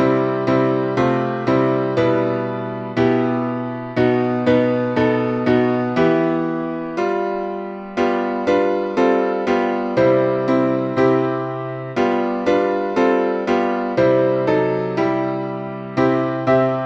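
Nothing in the audio stood out as a technical problem on listening.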